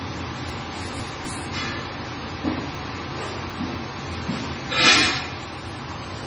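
Throughout, nothing sounds above 10.5 kHz, and the audio is watery and swirly with smeared attacks. This is likely heavy MP3 compression, fitting a bitrate near 24 kbps. From 0.5 to 1.25 s, and again from 2.75 to 3.75 s, the sound jumbles. These are chunks out of order: a 250 ms chunk plays two, then three, chunks late.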